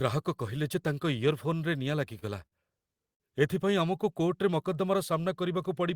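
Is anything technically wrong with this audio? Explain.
Yes, there are three short stalls from a late packet in this speech, at 2.19 to 2.24 s, 2.46 to 2.54 s and 3.14 to 3.22 s. Each time a packet didn't show up on schedule, the jitter buffer ran dry, so the receiver held the last bit of sound for 26, 58 and 60 ms, then picked up where it left off. Nothing's actually lost, but those moments drag, with a faint buzzy or dipped quality.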